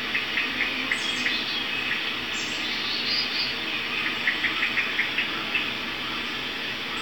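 Everyday sounds, with no technical faults to be heard.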